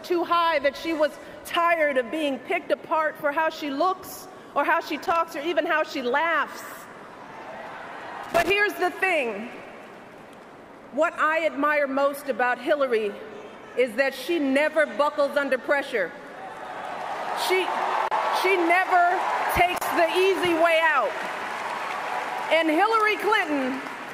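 A worn or dirty contact somewhere in the signal chain is making and breaking as it shifts, producing loose connector crackle twice: from 5.04 to 5.16 s and again from 8.24 to 8.50 s. Each time the contact opens, the audio is chopped into fragments, and any DC present on the line jumps with it, adding pops. The result is a short, irregular burst of scratchy crackle, with the second burst lasting roughly twice as long as the first.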